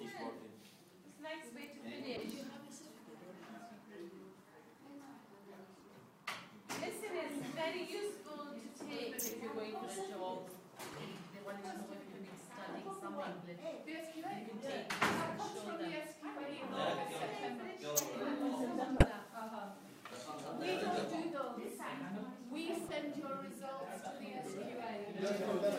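Corrupt frames decoded produce brief chirps, squeaks, blips or bursts of noise at 2.17–2.20, 5.80–5.83, 10.93, 18.97–19.07, 21.66 and 22.86–22.91 s. Damaged compressed frames misplace energy. The 19-second error is loudest.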